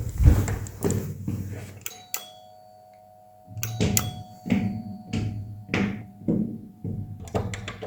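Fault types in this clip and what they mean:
Compressed frames skipped at 6.01 to 6.03 s: a short stretch of the encoded stream never reaches the output, either because those frames are missing from the file or because the decoder rejected them as corrupt. Playback jumps forward by about 70 ms, which fits roughly four frames of 20 ms each.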